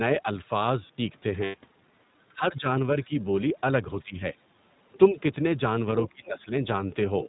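Speech coded with the iLBC codec throughout, at a rate that fits its 15.2 kbps mode with 20 ms frames, loses everything above 4 kHz and takes on a plainly rough, synthetic edge. At 1.44 to 1.55 s, lost iLBC frames leave a 100 ms gap that the decoder fills by repeating the last pitch cycle, heard as a brief buzzy held vowel before the voice snaps back. Speech suppressed in double talk, likely from an echo canceller ducking the talker while the far side spoke, pulls the voice down by roughly 15 dB at 2.34 to 2.67 s and 4.02 to 4.36 s, and by a smaller amount at 3.07 to 3.11 s. At 6.05 to 6.1 s and from 7.25 s to the end, the other side's voice leaks through as faint scraps well below the main speech, likely left behind by incomplete echo cancellation.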